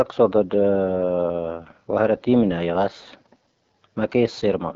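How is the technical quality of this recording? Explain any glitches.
The recording has plainly audible codec damage from start to finish.

AMR wideband (HD Voice) codec, throughout: the speech is modelled as pulses through a vocal tract filter at what sounds like about 8.85 kbit/s, so it comes out rough and raspy. A spectrogram shows harmonics to about 6.4 kHz, structureless noise above, and nothing past 7.7 kHz.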